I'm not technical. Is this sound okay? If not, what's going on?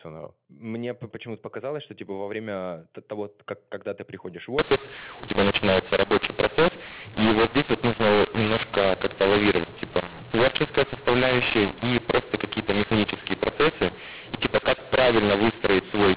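No. From 4.59 s to the end, right after "когда ты приходишь в", there is a mu-law and A-law mix-up. Telephone audio packed with one coding rule (mu-law) was unpacked with the other (A-law). The two rules map loudness differently, so some moments come out too loud, others too quiet, and the pauses fill with hiss. The speech turns harsh and distorted. Before 4.59 s you hear narrow telephone sound, with nothing above 4 kHz.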